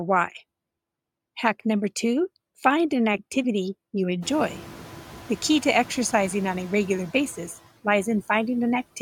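Noise suppressor artifacts run through the whole speech clip. The processor cuts steady noise by about 18 dB between words, so the background drops away in pauses and swells back under speech. On a spectrogram, the noise floor empties in gaps and refills beneath each phrase. The room noise it works against jumps by about 24 dB around 4 s, settling about 19 dB below the speech.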